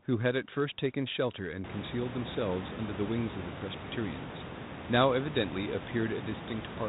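Nothing's gone wrong here; the room's background noise just swells by about 22 dB around a second and a half in and stays well under the speech, which is simply how the room sounds, not a fault.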